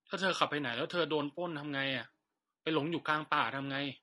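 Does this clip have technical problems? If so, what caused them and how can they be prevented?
Yes. The speech is rough and grainy from start to end, with noise filling the gaps between pitch harmonics and a top band that sounds thinned or synthetic: plainly audible low-delay AAC compression, likely from AAC-ELD at a rate near 32 kbps. Its very short frames resolve harmonics poorly, so the coder spends bits inefficiently. Simple bandwidth limiting would leave the voice smooth but dull; here the harmonics themselves are smeared into grit. To prevent it, raise the call bitrate or use a longer-frame codec when low delay isn't essential.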